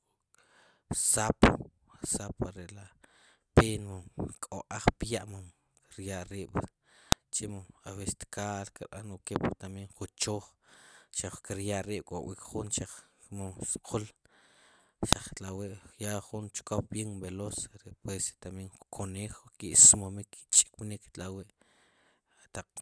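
At 7.12 s and again at 15.13 s the speech is cut by a sharp, loud click: a file header played as audio. The pieces were joined without stripping their WAV headers, so a few dozen header bytes play as samples. The 8 s spacing fits pieces 8 s long. On the waveform each shows as a brief sharp spike, unrelated to the speech; on a spectrogram, a thin vertical line across all frequencies.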